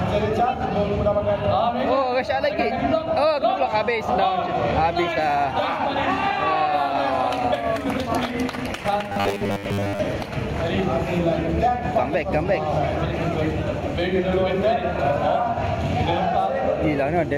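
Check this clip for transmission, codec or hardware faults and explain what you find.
One fault stands out: robotic sound from repeated short buffers, from 9.09 to 10.00 s. New audio likely arrived too late, so playback looped a 10 ms fragment over most of the passage, imposing a fixed 100 Hz buzz that turns the sound rigid and metallic while its overall shape still comes through.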